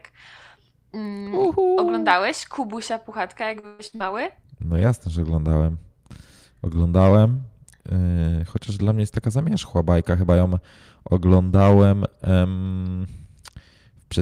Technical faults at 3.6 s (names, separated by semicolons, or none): repeated packet loss (robotic sound)